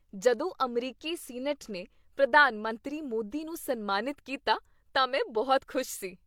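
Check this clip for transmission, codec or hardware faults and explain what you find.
The speech carries one fault throughout: it sounds like transcoding between lossy codecs. The likely cause is an MP3 encode near 96 kbit/s later re-encoded as HE-AAC near 48 kbit/s. The second encoder spent its bits on the first encoder's artefacts. Both sets are heard together: the artefacts of the two codecs mixed over a dull, band-limited top.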